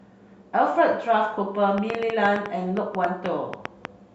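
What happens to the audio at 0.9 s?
Nothing goes wrong at 0.9 s; the speech carries straight through that moment with no dropout, click, distortion or other audible fault.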